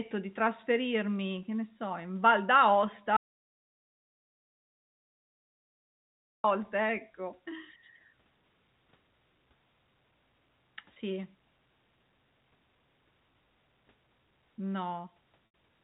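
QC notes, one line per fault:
3.17–6.44 s, audio dropout to silence: the sound cuts off mid-flow for about 3.3 s of silence, with no room tone. The input was likely lost while recording continued.
10.94–10.96 s and 15.46–15.54 s, packet loss with pitch repetition: gaps of 20 ms and 80 ms are bridged by repeating the last pitch period. The first sounds like a brief buzzy hold. The second fades toward silence before the speech cross-fades back.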